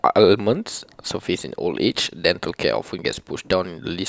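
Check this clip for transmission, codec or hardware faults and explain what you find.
No transmission, codec or hardware faults turn up in this speech clip.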